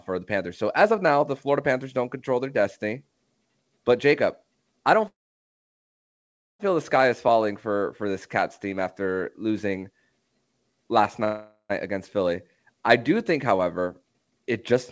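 At 5.08 s, right after "I don't", the speech stops in a call audio freeze lasting until 6.61 s, when it resumes with "feel the sky is". Almost all of that 1.5 s gap is silence. A second, shorter freeze runs from 11.25 s to 11.72 s, about 0.45 s of filler that is mostly a fading continuation of the last sound, with only a brief silent stretch at the end. In both cases packets were likely held up in transit, leaving the jitter buffer empty. The receiver padded the wait and then carried on from where it stopped, so nothing is lost but the delay grows by the length of each gap.

From 13.33 s, just after "I do", to 14.76 s, a jitter buffer speed-up plays the speech at about 117% of normal speed without changing pitch, so the delivery sounds hurried. The buffer was holding more than its target, so the receiver cut many pitch-period-sized slices, roughly 0.3 s in total, to bring latency back down. 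Throughout, the G.722 call codec at 64 kbps leaves nothing above 8 kHz.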